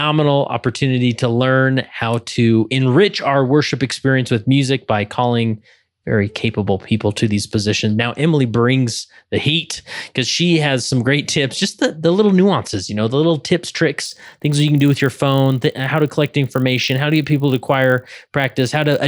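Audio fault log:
14.04–19.08 s: resampler restarted on every block. After "know the little tips", each 20 ms block is converted from 24 kHz to 48 kHz alone. Its edges lack true neighbouring samples. These edge errors recur at 50 Hz, a buzz riding only on the speech.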